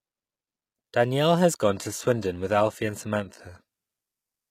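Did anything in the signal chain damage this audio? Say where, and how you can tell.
Yes. From 1.63 s to the end the adaptive stream drops to a lower bitrate: the treble suddenly turns thin without any gap, pointing to a fall from full-rate AAC to roughly 20 kbit/s HE-AAC. A spectrogram shows the top band abruptly emptied above 14.9 kHz.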